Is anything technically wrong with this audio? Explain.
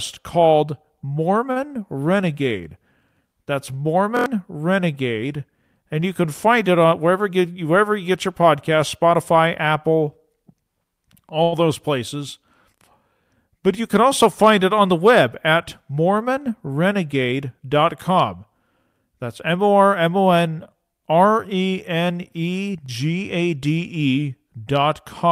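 Yes. The speech has three kinds of playback fault, all from audio arriving late or unevenly.

Short stalls from a late packet occur at 1.51 to 1.70 s and 11.43 to 11.54 s. Each time the next packet was late, the jitter buffer ran dry, and the receiver stretched the last sound, by 43 ms and then 89 ms, before carrying on from the same point. Nothing is skipped, but a sound hangs too long with a faint buzzy dip. A spectrogram shows flat, smeared harmonic bands across the held stretch, and the waveform envelope sags slightly there.

Repeated buffers occur at 4.17 to 4.26 s and at 22.86 to 22.89 s. New audio wasn't ready, so the device replayed its last block of about 23 ms, which fits a 1024-sample buffer. It played four extra times in the first case and once in the second. The first is heard as a rapid stutter, costing roughly a tenth of a second of audio. The second is a single short repeat. 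The waveform shows identical short segments side by side with abrupt joins, and the spectrogram shows vertical lines at each join.

Jitter buffer speed-ups occur at 6.84 to 7.46 s, running at 108%, and at 17.24 to 18.36 s, running at 107%. Too much audio had built up in the buffer, so the receiver trimmed many tiny pitch-period-length slices to reduce delay. That removed roughly 50 ms and 70 ms respectively. The pitch stays the same, but the speech sounds hurried. On a spectrogram the syllables appear compressed in time while the harmonic spacing is unchanged.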